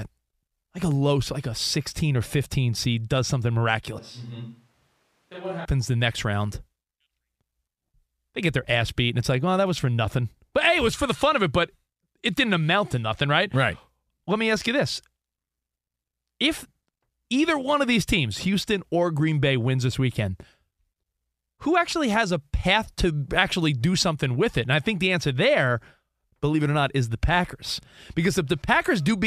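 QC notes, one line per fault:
3.99–5.65 s, switch to a distant microphone: the close mic likely dropped out, leaving a farther one. After "seed does something", the voice turns suddenly roomy and hollow, thinner in bass, around 10 dB quieter with more room noise, then snaps back before "the next round".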